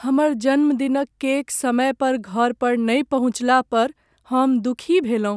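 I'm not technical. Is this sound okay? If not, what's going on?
Yes, this speech recording sounds fine. I can't hear anything technically wrong with it at any point.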